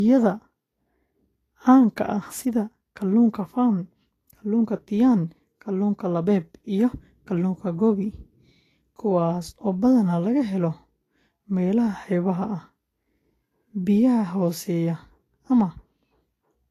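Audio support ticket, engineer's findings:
Low-bitrate audio saved at a high bitrate, throughout. Speech band empty above 14.2 kHz, hard cut-off, with the earlier encode's codec artefacts still present. Current MP3 layer at high rate adds almost nothing; artefacts likely inherited from an earlier low-bitrate encode, roughly Vorbis around 33 kbit/s territory, then re-saved. Removed content unrecoverable; large file size misleading. Source the original pre-encode audio.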